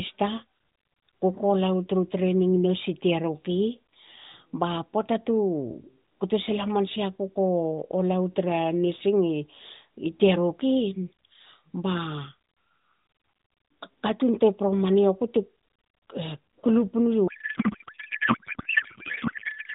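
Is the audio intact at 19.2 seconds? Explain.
No. From 17.28 s to the end, a codec payload misread turns the speech into garbled noise and warble that barely tracks it. Octet-aligned AMR is being unpacked as bandwidth-efficient, so every field lands wrong. Unlike packet loss, there are no gaps, just continuous nonsense.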